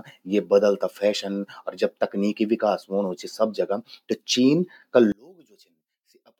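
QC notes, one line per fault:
5.12–6.39 s, one channel inverted: the speech suddenly drops by about 34 dB and stays down to the end of the clip. What remains is faint, with the centred voice almost gone. The likely cause is one stereo channel with reversed polarity. When the two channels are summed to mono, everything they share cancels. Only the small difference between them survives, and that leaves this weak residue.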